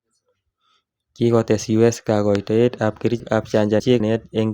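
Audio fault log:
2.35–2.37 s, loud pop: a single sharp pop sits about 15 dB above the speech, which continues underneath. It is likely a voltage pulse from a switch, plug or static. On a waveform it is one tall spike, and on a spectrogram a thin vertical stripe across all frequencies.
3.2–4.0 s, chunks out of order: a 200 ms section of speech plays three chunks late, after the material that should follow it. This garbles the passage, and there are three hard joins. The spectrogram shows abrupt vertical discontinuities where the speech formants jump.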